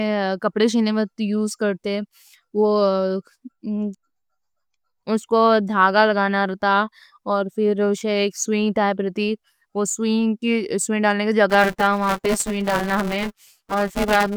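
From 11.49 s, just after "ڈالنے کا", to the end at 14.37 s, buffer tearing: the writer and reader have slipped, so roughly half of each 5 ms buffer repeats audio about 10 ms old. That gives a steady 200 Hz robotic rattle that follows the signal, unlike random dropout clicks.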